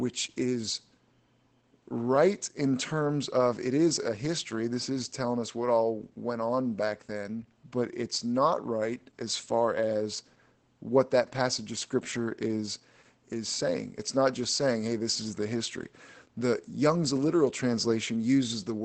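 Across the whole recording the speech carries Opus voice compression at a plainly audible level. Nothing survives above about 8.8 kHz, which points to the SILK coder running in wideband mode at a low rate, around 12 kbps. Unlike a simple low-pass filter, which would only dull the top end, the coarse coding of the excitation makes voiced sounds hoarse and faintly robotic, with a grainy texture throughout rather than a clean loss of treble.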